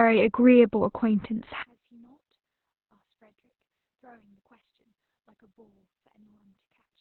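From the start the speech carries Opus voice compression damage: nothing reaches above 4.2 kHz, and the voice sounds muffled, hoarse and faintly robotic. That fits the SILK coder working in narrowband at a very low rate, around 8 kbps, with 20 ms frames. It differs from a simple low-pass filter because the coarse coding roughens the voice itself and adds a buzzy, synthetic grain, rather than only dulling the top end.

At 1.63 s the speech suddenly collapses by about 36 dB and stays that way to the end. Only a faint residue remains. This is most likely one channel inverted: one stereo side has flipped polarity, so the centred voice cancels when the channels sum to mono. A dropout or mute would leave silence. Here a trace of the difference between the channels survives, which is the mark of cancellation rather than lost signal.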